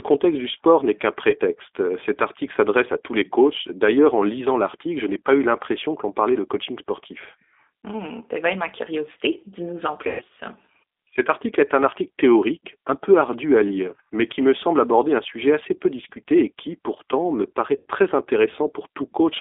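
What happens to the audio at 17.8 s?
About 90 ms of packets went missing from 17.77 to 17.85 s, fitting three lost packets. The decoder's packet loss concealment stretched its last pitch and filter, fading into a buzzy tone or coloured noise and leaving the speech weak just after. Throughout, the G.729 codec rebuilds the speech from a vocal tract filter, pitch predictor and sparse pulses within a 300 Hz to 3.6 kHz line band, so it sounds narrow, rough and synthetic.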